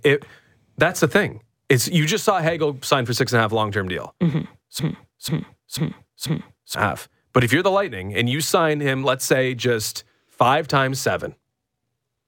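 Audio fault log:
4.79–6.75 s, broken-record loop: a single stretch of speech about 0.49 s long plays four times in a row, identical copies butted end to end, so the speech stutters mechanically instead of moving forward. The exact repetition points to a stall, likely in the player, encoder or stream, that kept resending the last fragment it held. The speech that belonged in those two seconds is lost, and when the loop breaks the audio resumes further along.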